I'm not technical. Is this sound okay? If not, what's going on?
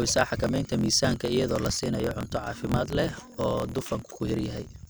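No. There's a block size mismatch (truncated) throughout. Each chunk's end gets dropped, so the speech has a low 43 Hz buzz and runs 1.12 times fast, with its usual tone.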